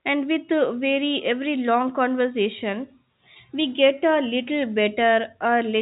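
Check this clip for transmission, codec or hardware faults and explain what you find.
No transmission, codec or hardware faults turn up anywhere in the speech. The audio has the narrow telephone band of G.711 telephone coding, with nothing above about 3.8 kHz, which fits mu-law at 64 kbps.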